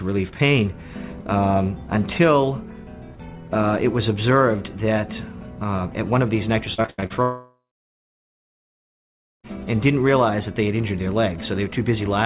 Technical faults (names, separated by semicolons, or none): repeated packet loss (robotic sound); long network dropout